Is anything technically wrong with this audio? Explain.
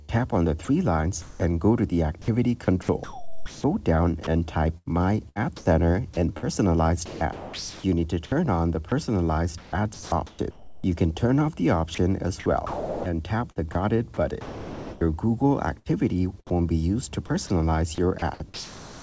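Yes. Three related faults can be heard, all pointing to a sender that stops transmitting whenever it judges the input to be background.

Comfort noise in place of the background: from 0.21 to 1.40 s and from 2.22 to 3.64 s, the sender likely switched to discontinuous transmission, and the receiver filled the gaps with synthetic noise. About 210 ms of the first stretch and 660 ms of the second are replaced. In those spans the real background gives way to a smoother generated noise that differs in tone or level from the surrounding background.

Sound dropped by the voice detector: at 0.65 to 0.68 s and 2.22 to 2.28 s, the detector likely misread real sound as background and cut transmission. About 30 ms and 60 ms of sound are lost and replaced by comfort noise. Each appears as a brief gap where the sound gives way to steady noise before returning once the detector triggers again.

Sound chopped by the voice detector: over 4.78 to 7.84 s, 8.89 to 10.84 s, 11.95 to 16.55 s and 18.19 to 19.02 s, the detector likely toggled between sending and muting more than once within each stretch. 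About 0.98 s, 0.81 s, 1.2 s and 0.57 s are replaced. The result is repeated holes, from clipped edges to longer dropouts. Throughout, the call codec passes nothing above 8 kHz, consistent with G.722.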